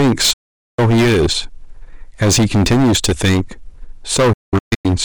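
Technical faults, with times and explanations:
throughout: hard clipping. The speech is driven about 15 dB past what the signal path can carry, so roughly a fifth of the waveform has its peaks sliced flat. Those squared tops add high harmonics, giving a harsh, buzzing fuzz on every loud syllable.
0.33–0.79 s and 4.33–4.86 s: digital broadcast dropout. The receiver stopped getting valid frames and muted with an 8 ms fade. The first gap is one solid silence of about 0.45 s. The second breaks into several short holes over about 0.5 s, the longest about 0.19 s. The sound sent during the muting is gone.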